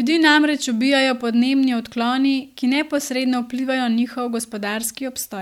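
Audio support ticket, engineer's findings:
Speech signal reviewed in full; no technical faults heard, no action required on the playback or capture path.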